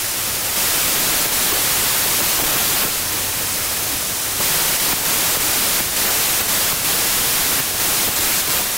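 Throughout the clip there is a wrong sample width fault: the playback treats each sample as two bytes when the pattern fits packed 24-bit data. Most values straddle byte boundaries, so harsh, loud noise buries the original sound, which runs slow and low at two-thirds speed.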